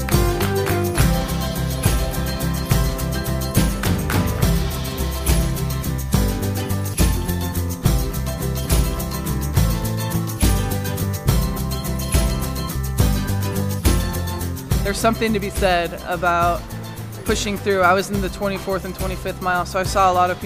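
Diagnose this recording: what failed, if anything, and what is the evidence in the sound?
Nothing failed in this recording, and the sound gives no evidence of any fault.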